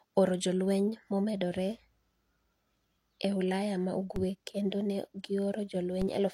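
Speech with two DC steps, at 4.16 s and 6.02 s. At each one the waveform's zero line suddenly jumps, heard as a brief low thump while the speech carries on unchanged. The offset then drains away as if through a 20 Hz high-pass, so on a waveform the trace shifts off centre and curves back. On a spectrogram each step shows as a thin vertical stripe with energy concentrated at the bottom.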